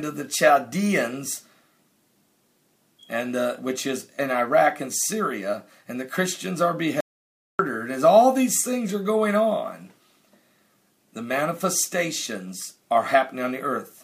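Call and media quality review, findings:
Audio dropout to silence, 7.01–7.59 s. Input path likely lost (device disconnect, link failure or stray mute) while the encoder kept writing silence. Sound cuts off mid-flow into dead silence for about 0.59 s, no room tone, then resumes abruptly.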